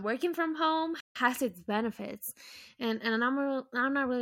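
At 1.00 s, after "working from home", the speech cuts to silence for 150 ms until "its benefits": a playback stall, likely from the player running short of data.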